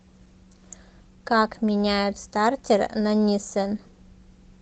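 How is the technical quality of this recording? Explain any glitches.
Nothing in the recording stood out as a glitch or technical problem on listening.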